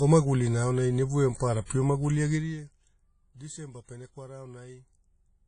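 Codec damage throughout: the audio has nothing above 10.1 kHz, and ringing, washy smearing with a hiss that breathes along with the speech is plainly audible. This points to WMA compression, likely at a low bitrate around 32 kbps, where long transform blocks spread quantisation noise over tens of milliseconds and weak spectral lines are zeroed.

Zipper noise from 2.35 to 2.73 s: the level falls by roughly 20 dB in unsmoothed steps, around a hundred a second. Each step puts a small click into the signal, so the fade carries a ticking, zipping texture while the level moves.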